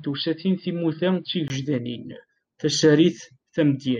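Speech that sounds dull and boxy for its first 1.5 s, then opens up to a fuller, brighter tone. This is most likely an input switched to a poorer device: the opening section comes through a narrower-band microphone path. On a spectrogram, energy above 5 kHz is absent until 1.5 s, with a faint added noise floor well below the speech. The waveform shows a brief gap of about 20 ms at the switch and no obvious level jump.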